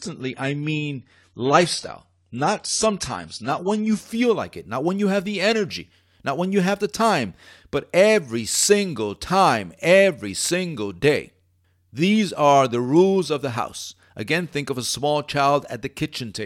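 From 0.0 to 4.0 s the speech plays through an adaptive stream starting at a low bitrate: the player began on a cheap version of the stream and switched up once it had measured the connection. Nothing above 11.5 kHz is present, so the sound is dull, with stronger codec artefacts, which points to AAC-LC at around 32 kbit/s. At 4.0 s the quality jumps, with no gap, to what fits roughly 96 kbit/s. On a spectrogram, the top band is empty until 4.0 s.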